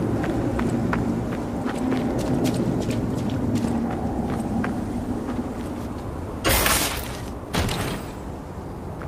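From 3.80 to 5.70 s a call bitrate drop sets in: the sound turns rough and watery, consistent with the encoder falling from roughly 64 to 22 kbps for about 1.8 s. The spectrogram shows the upper band thinning out, with a lowered, smeared top edge until normal detail returns.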